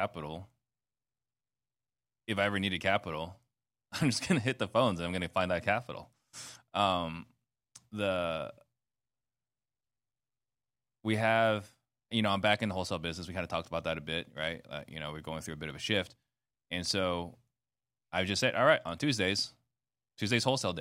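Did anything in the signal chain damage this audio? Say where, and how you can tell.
No, nothing in the chain seems to have harmed this one; I can't hear any stage along the way leaving a mark on the speech.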